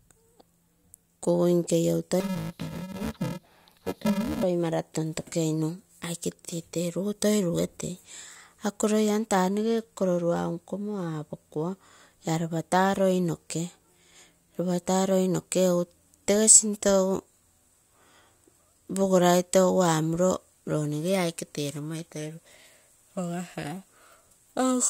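Interleaved audio read as planar affects this speech clip from 2.20 to 4.43 s, between "kugui nke iou" and "mara tontokeinu". Each short block, about 2.67 ms (which fits a 128-sample block), is split into half-speed left and right halves, so the audio turns dull and robotic, buzzing at 375 Hz without an octave drop.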